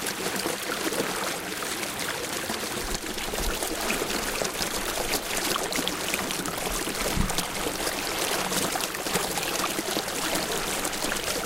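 From 0.34 s to 11.35 s, a click recurs every 0.92 s, about fifteen in all, each a slip of about 15 samples. This clock drift buffer slip is likely caused by two mismatched clocks. Its strict regularity separates it from random dropouts or packet loss.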